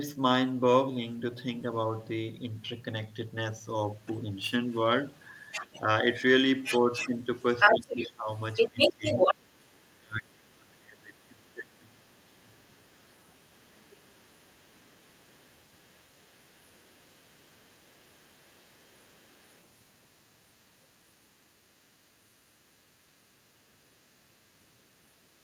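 Throughout the clip, one stage writes longer blocks than the next reads, and each block's tail is discarded. This block size mismatch (truncated) puts a steady 100 Hz buzz under the speech, though the pace stays essentially normal.

From 1.97 to 2.61 s, and again from 3.92 s to the end, the other side's voice leaks through, likely because the echo canceller left residue of the far-end loudspeaker in the microphone. It sits about 40 dB, then about 35 dB, below the speech as a faint second voice.

Where both sides talk at once, the canceller likely treats the talker as echo, suppressing speech in double talk. This happens at 3.85–4.3 s (dips of about 5 dB), 5.81–5.88 s (about 5 dB) and 6.8–7.18 s (about 10 dB). From 7.72 to 12.48 s it goes deeper, about 25 dB, affecting roughly three seconds of speech.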